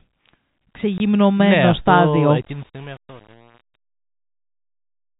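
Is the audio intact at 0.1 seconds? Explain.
Yes, at 0.1 seconds the speech runs on unbroken through its telephone-band G.711 coding, with no dropout, click or other fault at that moment.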